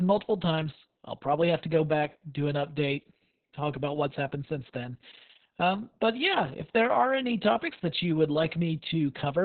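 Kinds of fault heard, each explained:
Opus voice compression: The speech goes through a linear-prediction voice coder at a very low rate, which fits about 6 kbps. Nothing sounds above 4.4 kHz, so it is narrowband and muffled. Coarse excitation coding makes it hoarse and robotic throughout.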